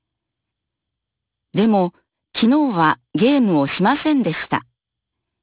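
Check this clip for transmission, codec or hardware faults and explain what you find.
Aliasing runs through the whole clip. The speech was resampled down, which fits a drop to an 8 kHz rate, with no anti-alias filter first, so energy above 4 kHz folded back below it at roughly 20 dB under the speech. Sibilants sound gritty and metallic, and the spectrum stays dense right up to 4 kHz.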